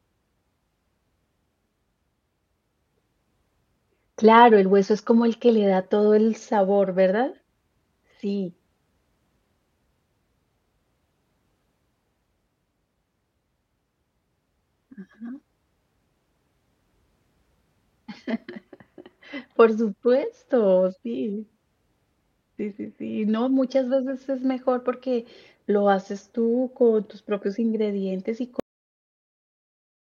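At 28.60 s, right after "tus propios ingredientes y", the speech suffers a cut-off end: the final buffers were never written, so the sound stops mid-syllable and drops straight to digital silence. Unlike a fade-out or a natural ending, there is no decay and no tail.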